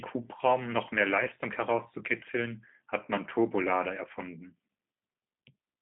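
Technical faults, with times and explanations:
Throughout, G.729 codec: the speech is squeezed into a phone band of roughly 150 Hz to 3.5 kHz with nothing above 3.6 kHz, so it's dull and boxy. The codec damage is plainly audible. The codec doesn't keep the waveform. It rebuilds each short frame from a vocal tract filter, a pitch guess and a few pulses, which makes the speech slightly rough and synthetic. That fits an 8 kbit/s G.729A stream.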